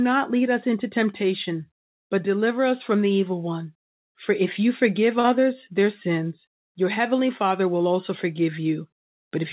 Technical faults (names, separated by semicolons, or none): short concealed packet loss